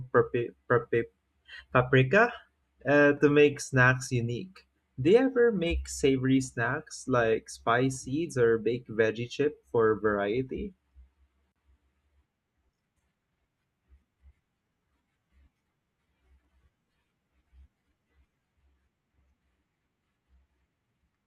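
At 3.29 s the stream likely dropped samples, perhaps just one, so the waveform steps abruptly to a later value. The gap is a tiny fraction of a millisecond, too short to remove any speech, and is heard as a single sharp click.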